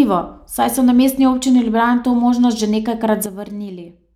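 At 3.26 s the level drops abruptly by about 10 dB and stays down to the end. This is a sudden gain jump. The speech and the background noise fall together in one step. The likely cause is a gain change applied between two samples without any ramp.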